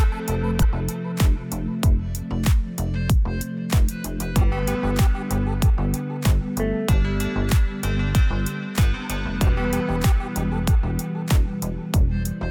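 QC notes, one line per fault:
0.60–0.65 s: damaged data in a compressed stream. A short chirp, squawk, click or brief hole cuts through the sound. Corrupted bytes made the decoder misread those frames, lose sync and skip forward to the next valid frame header.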